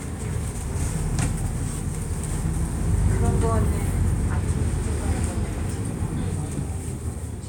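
Nothing stood out as a technical fault on listening to this recording of everyday sounds.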